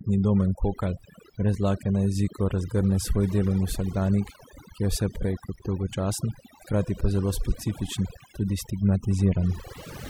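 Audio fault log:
Throughout, overdone noise removal: the noise reduction was pushed way too hard, so any frequency band sitting near its idea of the noise floor got pulled right down or switched off. That's why the gaps between phrases drop to near silence with little twinkling specks popping in and out, and why the speech's quieter detail was close enough to the noise to get stripped along with it.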